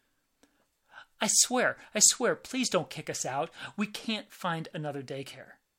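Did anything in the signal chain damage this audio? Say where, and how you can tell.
No, nothing along the way seems to have hurt this speech recording, and I can't point to any stage that left a mark on it.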